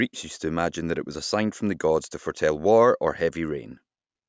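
Nothing stood out on listening to this speech recording.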